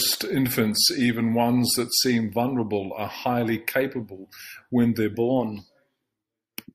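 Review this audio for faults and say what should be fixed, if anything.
Wrong sample rate, from 0.0 to 5.14 s: the speech runs slow and sits low, about 1.5 semitones flat at roughly 0.92 times normal speed, which fits 48 kHz material being played back at 44.1 kHz with no conversion. Because the samples are simply read out at a slower clock, duration stretches and pitch drops together by the same ratio. To prevent it, tag the file with its true rate and resample whenever the playback rate differs.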